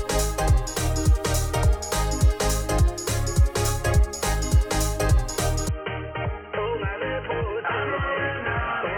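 The audio abruptly turns dull and boxy at 5.69 s and stays that way to the end, with nothing above 3.2 kHz, a level a few decibels lower and a faint new noise floor. That points to the input likely switching to a poorer device, not a filter, since tone, level and noise all change together.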